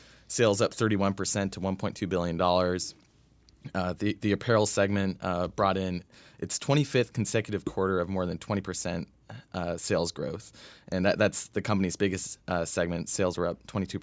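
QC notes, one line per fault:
No faults are present: the speech has passed through normal call microphone processing, so it contains nothing above 8 kHz and its lowest bass is taken out by the expected high-pass filter.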